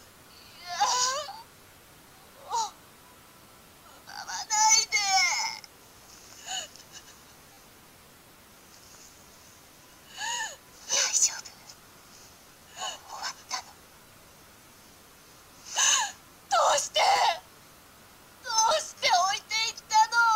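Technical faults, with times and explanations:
5.42 s, 7.53–7.57 s, 10.94–10.96 s, 17.16–17.18 s and 18.98–19.02 s, repeated buffer: fresh audio failed to reach the output in time, so the device replayed the last chunk, whose length fits a 10 ms buffer. At 5.42 s one extra pass gives a single click. Two extra passes at 10.94 s and 17.16 s, and four at 7.53 s and 18.98 s, stack hard joins into a brief buzzing stutter. No audio appears lost.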